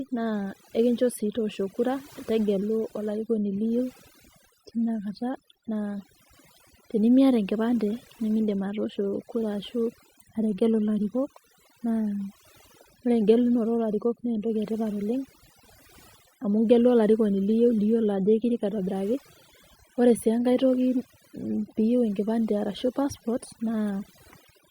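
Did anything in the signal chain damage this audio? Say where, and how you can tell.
Yes: overdone noise removal at the processing stage, set too aggressively throughout, gates bands near the noise floor, leaving twinkling specks in near-silence and stripping out quiet parts of the voice.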